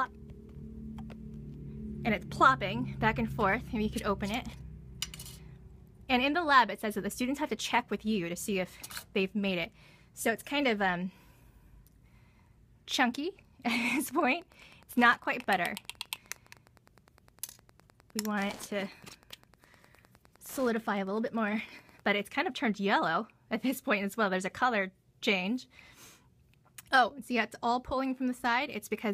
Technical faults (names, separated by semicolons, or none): Wi-Fi interference